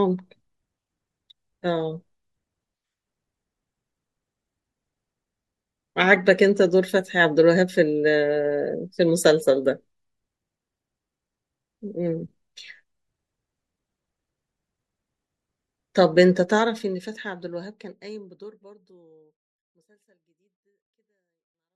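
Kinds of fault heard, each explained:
No technical faults are present in this speech recording, and the level eases gently down from roughly 16.5 s to the end, the way an editor's fade would, without any click or abrupt edge.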